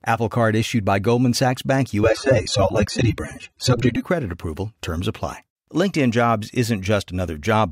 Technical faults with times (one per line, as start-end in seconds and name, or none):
2.04-4.04 adaptive stream at a lower bitrate